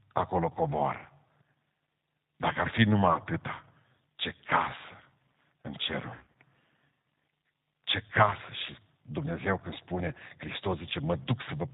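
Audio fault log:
throughout: G.729 codec. The speech is band-limited, with nothing heard above 4 kHz, and carries a rough, slightly synthetic texture. The damage is plainly audible. This fits an 8 kbit/s G.729A encoding, which discards the original waveform and rebuilds each 10 ms frame from a vocal-tract filter, a pitch predictor and a handful of pulses. The grain comes from that sparse pulse excitation, and the top band is lost to the narrowband design.
3.13–3.19 s: VoIP packet loss concealed by the speech codec. Just after "ar fi numai", about 20 ms of audio is missing. The decoder fills the gap by extending its last pitch and filter into a brief stretched sound that fades, and the voice stays weak for a short time after it, since each frame builds on the previous one. This points to a single lost packet.
6.15–6.34 s: VoIP packet loss concealed by the speech codec. About 140 ms is missing, scattered across roughly 200 ms, with the longest gap lasting 60 ms. 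The voice breaks into stretched, fading sound within the gaps. This points to several packets lost close together.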